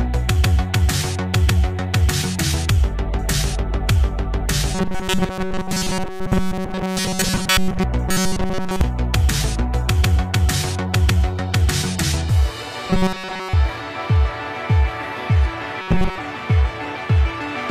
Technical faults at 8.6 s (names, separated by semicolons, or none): robotic sound from repeated short buffers